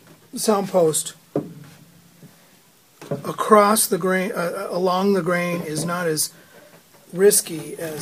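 No technical faults are audible.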